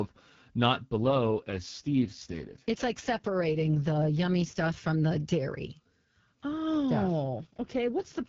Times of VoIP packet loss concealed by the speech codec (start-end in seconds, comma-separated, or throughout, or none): none